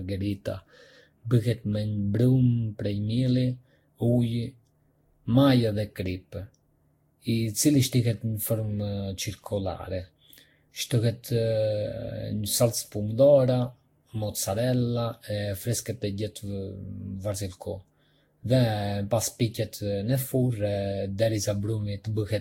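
Generation loss runs through the whole speech clip. The sound is swirly and hollow, and consonant attacks are smeared. Nothing is heard above about 16.6 kHz. This is likely the result of repeated lossy coding, around seven passes, with each pass quantising again on a shifted frame grid. The noise and spectral gaps stack up. The smearing is heavier than one pass would give, and it points to a Vorbis chain near 60 kbit/s.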